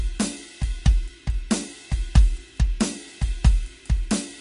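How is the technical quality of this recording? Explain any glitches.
The technical quality is poor: the music carries plainly audible codec damage from start to finish. Throughout, the sound is watery and swirly, with metallic chirps on bright high-frequency content and softened attacks. This is likely MP3 compression at a low bitrate, around 40 kbps. Short of bits, the encoder cuts everything above 10.6 kHz and drops weak frequency lines that flicker on and off between frames. A spectrogram shows a flat ceiling at 10.6 kHz and speckled, blinking gaps below it.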